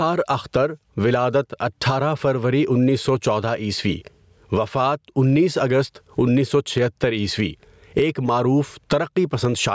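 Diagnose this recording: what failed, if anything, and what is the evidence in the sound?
The fault is gain pumping throughout the speech, at the input and level-control stage ahead of the call path, whose band-limited sound tops out near 8 kHz. The level is pulled down on each loud sound, with a swing of around 20 dB, so loud and soft parts end up closer in level and the speech sounds squashed. The likely cause is input gain set far too high, with a fast limiter clamping every peak. Unlike clipping, peaks stay clean. Unlike a noise gate, the sound is turned down rather than cut out.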